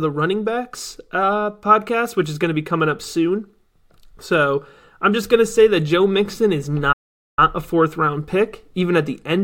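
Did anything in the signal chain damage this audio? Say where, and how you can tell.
Yes, there's a playback stall in this speech at 6.92 s. The audio just cuts to silence mid-flow for about 0.45 s, then picks back up at 7.39 s right on "a fourth round pick". It's a dead gap in the output, so this sits at the playback stage. Most likely the player's buffer ran dry or its output thread got blocked, and nothing was sent out until it caught up.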